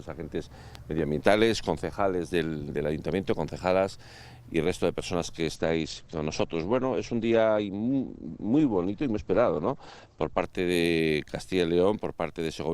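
At 0.75 s a loud pop occurs: two sharp pulses in quick succession, ending by 1.01 s, peaking around 5 dB above the surrounding level. The underlying sound continues beneath them without interruption. The double transient is consistent with a sudden voltage step entering the chain, likely from a connector being seated or a switch being thrown, with the downstream circuitry shaping that step into a brief thump rather than a clean edge.

From 5.57 s to 10.49 s there is a call bitrate drop. The top of the spectrum collapses from a full 20 kHz bandwidth to an 8 kHz ceiling, and the sound turns coarse and muffled, holding that degraded state for nearly 5 s before quality returns. The change in texture points to the encoder being pushed from roughly 64 kbps down to about 12 kbps after the link's bandwidth estimate fell, forcing coarser coding and the loss of high frequencies.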